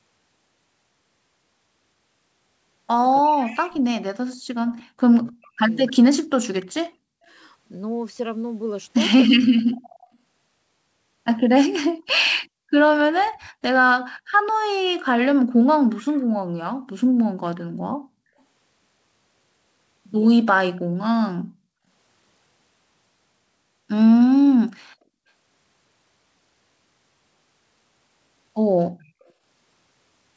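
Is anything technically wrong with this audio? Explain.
Yes. There are two problems, both from echo cancellation in a hands-free call. The G.722 path's spectrum stops at 8 kHz.

Speech suppressed in double talk occurs from 3.21 to 7.34 s and again from 9.28 to 9.67 s. While the far side spoke over this talker, the echo canceller likely could not tell the local voice from loudspeaker echo and attenuated everything. Over about three seconds in the first span, the speech dips and cuts out in pieces, by up to roughly 40 dB. A waveform shows the envelope collapsing in ragged gaps. A spectrogram shows the harmonics fading or blanking out.

Echo leak appears at 3.36, 6.61, 12.24, 15.9, 20.76 and 29.27 s, in bursts of 0.04 to 0.36 s. The loudspeaker end's canceller likely failed to remove all of what its microphone captured, so a copy of the voice returned about 0.3 s late. It is faint, roughly 20 to 40 dB below the speech, and loudest near 3.4 s and 16 s. 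On a spectrogram it looks like a weak repeat of the preceding harmonic pattern, offset by 0.3 s.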